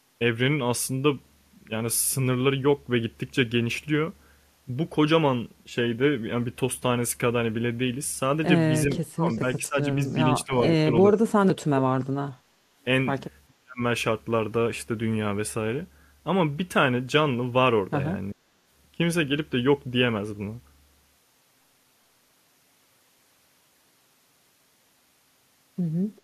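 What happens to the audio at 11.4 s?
At 11.4 s you're in the middle of speech suppressed in double talk, running from 10.44 to 11.98 s. The speech sinks by something like 35 dB, with about a second affected in total, likely because the echo canceller couldn't separate this talker from the loudspeaker echo and turned both down.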